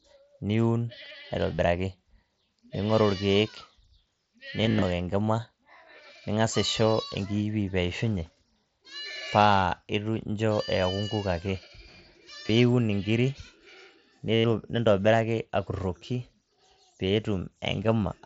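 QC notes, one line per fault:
1.55 to 14.45 s, concealed Bluetooth headset packet loss: headset packets dropped at 1.55–1.59 s, 4.62–4.84 s (scattered gaps, longest 37.5 ms), 12.47–12.49 s and 14.34–14.45 s. The phone refilled each gap by repeating recent waveform, producing short buzzy held tones, longest at 14.34 s.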